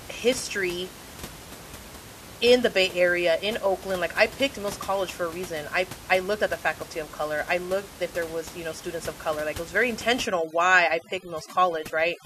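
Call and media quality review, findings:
Overdone noise removal, 10.26 s to end: background drops and breaks up into twinkling specks. Noise suppressor set too hard, zeroing bands near its noise estimate and eating quiet speech detail.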